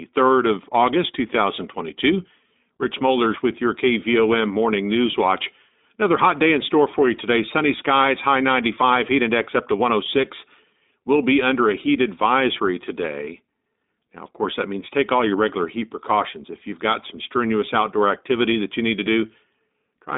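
iLBC codec damage runs through the whole clip. The speech has passed through a narrowband VoIP codec that codes each 20 ms frame on its own, without drawing on the one before, which fits the 15.2 kbps mode. Nothing reaches past about 3.8 kHz, and the line band sits between roughly 200 Hz and 3.7 kHz, so the sound is thin and boxy. The frame-by-frame coding leaves a plainly audible rough, synthetic edge on the speech.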